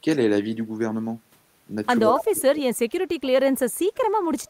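From 2.07 s to 4.32 s the speech is suppressed in double talk. Across about two seconds in total it sinks, thins and breaks off in pieces, dropping by as much as about 30 dB at its deepest. The likely cause is an echo canceller that could not tell this talker from the loudspeaker return while both sides spoke at once, so it attenuated everything. Network dropouts are abrupt, all-or-nothing gaps. These losses are ragged and partial.

Inside that stretch, from 2.16 s to 2.22 s, there is an echo leak: a brief, separate copy of the voice arriving 152 ms late and about 10 dB below the speech. It is likely residue that slipped past the loudspeaker side's echo canceller and was sent back. Room reverberation would be a smooth, continuous tail. This is a distinct, delayed scrap of the same sound, and short.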